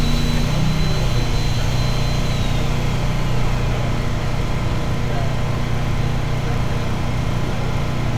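No technical faults can be heard anywhere in these sounds. There is nothing to mark at any point in the recording.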